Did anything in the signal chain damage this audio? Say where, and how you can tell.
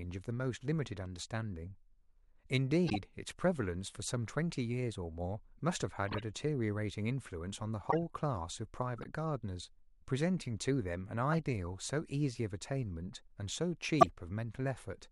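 Yes. At the codec stage, corrupt frames were decoded: brief chirps and noise bursts at 2.87–2.98, 6.07–6.22, 7.90–7.97, 8.98–9.05, 11.32–11.35 and 14.00–14.12 s, each spanning a few frames and the loudest near 14.0 s at about −10 dBFS. Damaged bits put energy at the wrong frequencies, which shows on a spectrogram as short vertical smears and on the waveform as spiky blips within the speech.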